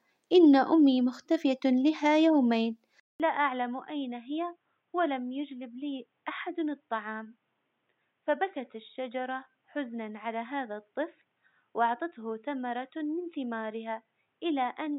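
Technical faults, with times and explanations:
3.00–14.98 s, input switched to a poorer device: after a 0.2 s gap the speech drops about 10 dB, loses everything above 3.8 kHz and turns dull, with a faint new noise floor far below it, likely from recording moving to a narrower-band microphone or headset profile.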